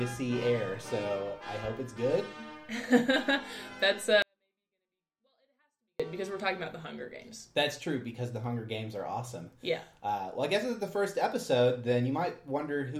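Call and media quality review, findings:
24-bit alignment error, 4.22–6.00 s: 24-bit samples in low bytes of 32-bit words read as full 32-bit integers. Audio drops about 48 dB, near-inaudible, abrupt level steps at both edges.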